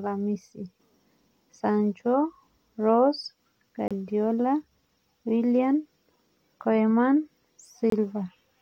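At 3.88 to 3.91 s and 7.90 to 7.92 s, there is a gap between stream segments. Segments about 4 s long leave timestamp holes. Hard-edged silences interrupt the speech without losing any.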